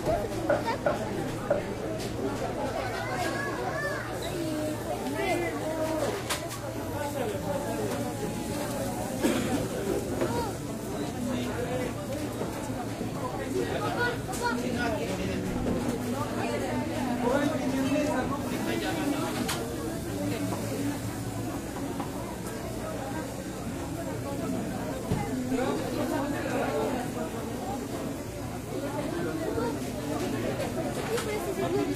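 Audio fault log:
No faults detected in this recording of sounds.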